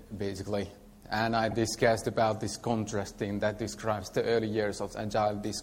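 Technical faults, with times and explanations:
1.50–1.53 s, repeated frames: a 24 ms slice plays twice, fitting one compressed frame resent, giving a brief stutter that adds time instead of leaving a gap.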